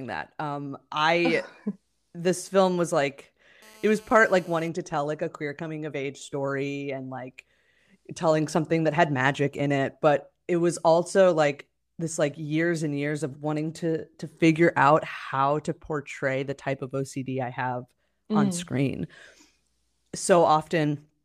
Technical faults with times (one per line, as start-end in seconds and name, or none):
3.62-4.69 GSM phone buzz